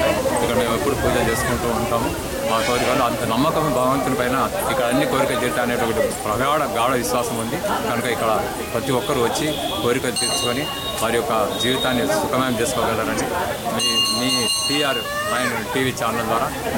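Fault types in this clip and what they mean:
Low bit depth without dither: A grainy distortion follows the sound throughout, likely from coarse rounding to about 5 bits. The waveform shows visible staircase steps, and the spectrogram shows a noise floor that rises and falls with the signal, roughly 20 dB below it.
Corrupt frame decoded: Four brief bursts, each 26 to 40 ms long, occur at 5.32, 9.29, 13.17 and 16.08 s, the loudest near 13.2 s. On a spectrogram each appears as a short vertical smear of misplaced energy.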